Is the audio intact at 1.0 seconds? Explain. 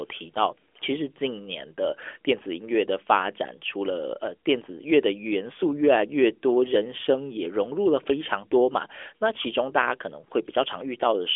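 Yes, the speech is intact at 1.0 seconds, with no dropout, click or other fault at that moment; it carries the narrowband sound of an AMR mobile link at 12.2 kbps, where nothing above about 3.6 kHz comes through.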